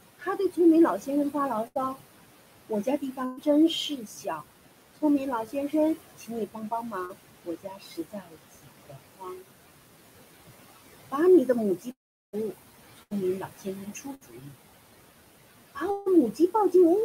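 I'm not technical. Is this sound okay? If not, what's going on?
No. There are several problems.

Noise suppressor artifacts run through the whole clip. A filter pushes the background noise down.

There is also speech cut by the noise suppressor. The same filter mistakes soft parts of speech for noise and turns them down. Soft parts sound swallowed or faint around 0.19 to 1.98 s, 2.69 to 4.42 s, 4.97 to 9.43 s, 11.12 to 14.56 s and 16.33 to 16.74 s.

A burst of packet loss happens at 1.67, 3.25, 13.03 and 14.15 s. Each time, a small piece of audio, between about 0.06 and 0.12 s, goes missing. It is replaced by a brief fading buzz or hiss.

A short concealed packet loss occurs at 7.05 s. A tiny gap of about 0.04 s was patched over, and it sounds like a quick smear or wobble.

A long network dropout likely explains 11.91 to 12.35 s. The sound fades into silence for most of that time. A shorter one, from 15.91 to 16.08 s, is only a fading buzz or hiss. 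In both, audio is lost.

The room noise in the background is normal. It belongs to the room, not to the system.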